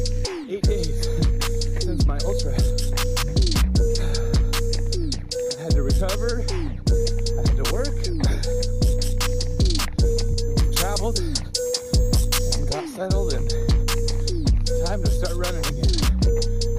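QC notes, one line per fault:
10.59–12.59 s, pre-emphasis left on: treble boost from the CD 50/15 µs curve was never undone, lifting 10 kHz about 8 dB over 1 kHz. Sound turns thin, bright and sibilant.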